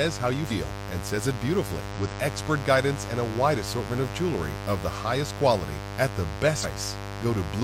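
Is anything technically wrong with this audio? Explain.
Yes. A mains buzz runs through the whole clip, about 10 dB below the speech. Switching spikes, twice in every 50 Hz mains cycle, produce a raspy drone, seen on a spectrogram as evenly spaced horizontal harmonic lines reaching several kHz.

Compressed frames are skipped at 0.47–0.52 s (after "how you", before "and says it") and 1.91–1.96 s (after "and says it", before "with expert guidance and"). Each skips roughly 100 ms, which fits two 46.4 ms frames. At 6.60–6.66 s, after "highest quality at the", roughly 200 ms goes missing. Each jump is visible as an abrupt discontinuity in the spectrogram's texture.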